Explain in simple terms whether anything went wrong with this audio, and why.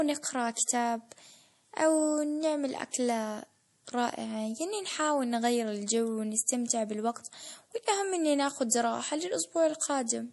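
Something did go wrong, and it lasts the whole clip. The speech sounds watery and swirly. The s sounds come out metallic and chirpy. Nothing at all comes through above about 11.5 kHz, so the top end sounds dull. The likely cause is heavy MP3 compression. To save space, the encoder throws away the highest sounds. It also drops quieter details that flicker on and off, and that causes the watery effect.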